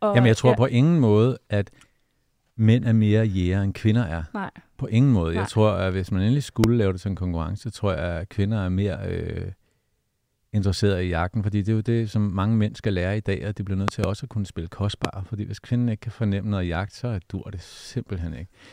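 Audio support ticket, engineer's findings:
Loud pop, three occurrences. Sharp, hard transients sitting well above the speech, peaks roughly 20 dB over signal level: single pop 6.64–6.66 s; double pop 13.88–14.06 s; single pop 15.05–15.07 s. Speech continues underneath each. Likely cause: a voltage step or spike entering the chain from a connector being seated, a switch, static discharge or a driver glitch, then shaped by downstream circuitry into a brief thump. The double at 13.88 s suggests a repeated contact or a bounce.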